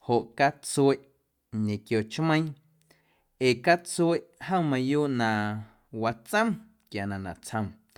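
Nothing goes wrong anywhere in this bit of speech, so there's no technical fault to point to at any moment.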